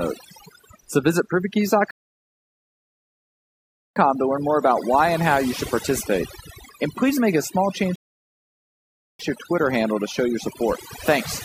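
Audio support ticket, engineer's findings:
Overdone noise removal across the whole clip: denoiser pushed too hard, gating bands near its noise floor, so the background breaks up, with twinkly specks in near-silent gaps.

Rebuffering stall at 1.91 to 3.96 s, resumes on "to learn more about", adding about 2.05 s. Another at 7.96 to 9.19 s, between "please make a small" and "to your", adding 1.24 s. Player buffer ran dry and playback paused until data arrived, with nothing lost.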